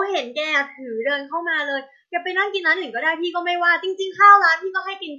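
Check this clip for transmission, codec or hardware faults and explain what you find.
Nothing here stands out as a transmission, codec or hardware problem; the speech comes through steady and intact the whole way.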